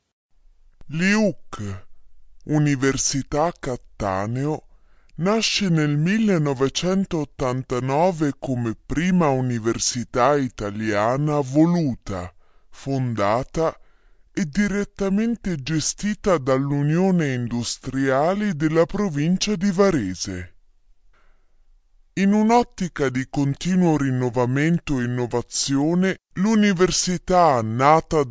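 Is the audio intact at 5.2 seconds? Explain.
No. At 5.2 seconds, as throughout the clip, the audio suffers from a wrong sample rate: it is played back slower than it was captured, with no conversion between the two. The speed ratio of 0.667 fits audio recorded at 24 kHz and played at 16 kHz. Timing and pitch drop together, so the speech runs at two-thirds speed and sits about 7 semitones low, sounding deep, sluggish and drawn out.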